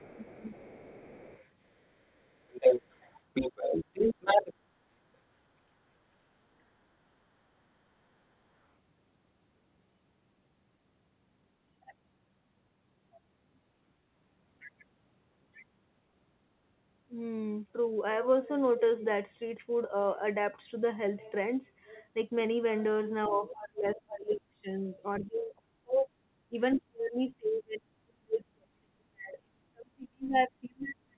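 From the start to 4.54 s, a second voice runs under the speech at about the same loudness. This is the other side's voice leaking through, likely because the loudspeaker's sound reached the microphone and the echo canceller failed to remove it. Inside that stretch, from 0.08 to 0.45 s, the talker's own voice sinks by up to about 15 dB across roughly a third of a second, then dips again from 4.14 to 4.69 s, briefly and by up to about 25 dB. Both dips are speech suppressed in double talk: with both sides active, the canceller likely could not tell its own talker from the echo and attenuated both. A similar dip of up to about 25 dB, lasting around a third of a second in total, comes between 7.11 and 7.79 s. At 23.24 to 23.29 s a short scrap of the far voice leaks through, about 20 dB below the speech. From 23.28 s to the end, the talker's voice is pushed down hard, by as much as about 40 dB, likely again through double-talk suppression. 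Another faint leak, also about 20 dB down, appears at 23.89 to 23.95 s. Throughout, the band stops at 4 kHz, which fits the G.711 telephone codec on the call path.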